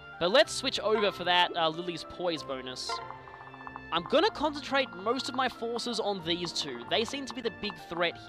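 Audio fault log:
7.43 s, block of digital silence: a sharp tick as the sound drops out for 11.6 ms. The output buffer likely went unfilled, fitting a 512-sample block, and was cut abruptly to zeros.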